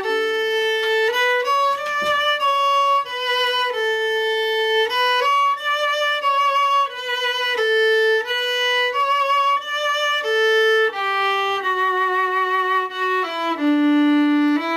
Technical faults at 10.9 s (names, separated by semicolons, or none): none